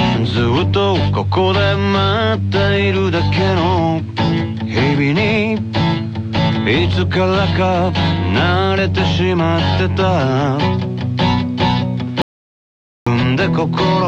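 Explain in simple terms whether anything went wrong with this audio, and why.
Near the end, from 12.22 to 13.07 seconds, the sound stops dead and is replaced by complete silence, with not even faint background noise left, before resuming abruptly. This is an audio dropout to silence. For about 0.85 seconds the recorder kept running but received no signal, so it wrote pure silence instead. The likely cause is a brief loss of input, such as a loose connection or an accidental mute. Whatever happened during that gap was not captured.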